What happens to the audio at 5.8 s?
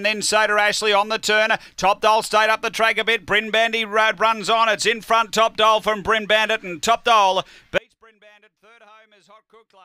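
Nothing goes wrong at 5.8 s; the audio runs through that moment intact, with no dropout, click or other fault.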